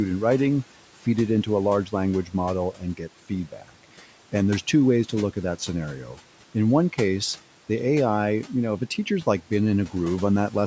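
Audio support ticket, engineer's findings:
Background noise pumping down between phrases and swelling under them. Noise suppressor artifacts: frame-by-frame band gating, noise pulled down about 12 dB, room noise about 20 dB under speech.

Speech swallowed at 2.25–2.35 s and 2.73–3.01 s, dips about 10 and 11 dB. Speech cut by the noise suppressor: quiet speech energy misread as noise and attenuated.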